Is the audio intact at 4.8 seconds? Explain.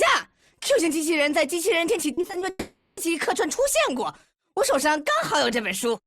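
Yes, the audio is intact at 4.8 seconds, with no dropout, distortion or other technical fault at that moment.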